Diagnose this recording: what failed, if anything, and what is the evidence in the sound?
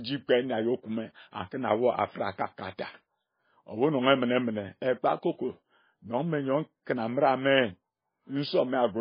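Heavy MP3 compression at the codec stage, likely a very low bitrate near 17 kbps: the speech has nothing above 5 kHz throughout and sounds watery, with swirling, smeared consonants.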